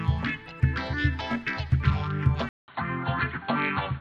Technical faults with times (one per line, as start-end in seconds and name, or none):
2.49-4.00 input switched to a poorer device